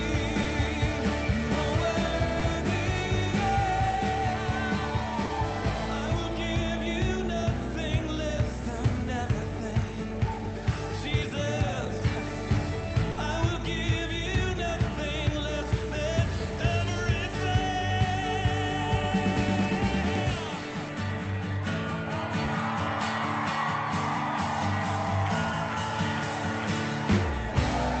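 Short concealed packet loss hits at 0.43–0.47, 2.39–2.43 and 5.25–5.31 s. About 20 ms of audio, 40 ms in the third case, arrived too late, and the receiver patched each hole by extending the preceding sound. Each one is a brief smear or wobble. On a spectrogram it appears as a thin vertical band where harmonics flatten or blur, and the waveform shows a short repeated or noisy stretch.

At 13.11–13.19 s a burst of packet loss removes about 60 ms. The concealment stretches the last sound into a held buzz or hiss that fades before the audio jumps ahead. The spectrogram shows a frozen, dimming patch with no real change inside it, and the waveform shows an envelope that decays across the gap.

A final short concealed packet loss at 22.45–22.49 s fills about 20 ms the same way, a brief wobble visible as a narrow smeared slice. Throughout, the call codec's cut-off near 8 kHz leaves the spectrogram empty above that line.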